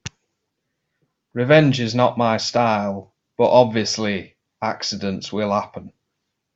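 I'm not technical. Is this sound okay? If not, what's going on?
No. From about 1.4 s to 5.93 s there are faint, evenly spaced ticks in the speech, about four of them, roughly one every one and a half seconds. These are clock slip clicks. The likely cause is two pieces of equipment each keeping their own time and drifting apart slightly, so a single sample is skipped or doubled now and then. Their steady rhythm sets them apart from random crackle or dropouts, which come irregularly.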